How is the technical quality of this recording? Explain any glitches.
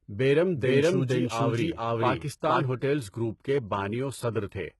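The recording has two audible problems: a gritty, compressed quality throughout and a section where the speech is heard twice at once.

Across the whole clip, s sounds and other high-frequency detail sound metallic and lispy, with heavy coding damage and nothing above 11.8 kHz. This is likely HE-AAC compression at a low rate, which fits roughly 16 kbps. The codec keeps only the lower spectrum and synthesises the treble by copying lower bands upward under a coarse envelope. The top stays bright, but its harmonics no longer match the real ones.

From 0.55 s to 2.65 s, a second copy of the speech runs underneath, roughly as loud as the original and trailing it by about half a second. It has no room decay and cuts in and out abruptly at both ends. This is likely a doubled audio track, where the same signal is mixed in twice through a second, slower path or an edit that holds two out-of-step copies.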